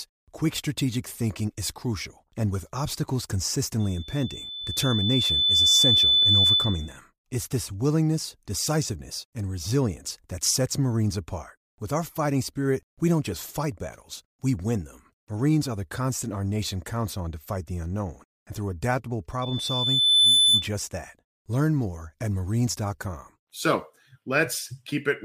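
A thin, piercing tone near 3.5 kHz swells up from 3.79 s, right after "crucial and with obstacles", over roughly two seconds until it sits clearly above the speech, then stops at 6.98 s. It returns after "unknown and through adaptable", from 19.42 s to 20.67 s, rising faster, in about a second. This is loudspeaker feedback squeal: the microphone hears its own loudspeaker, and at that one frequency the loop gain passes unity, so the tone keeps feeding itself.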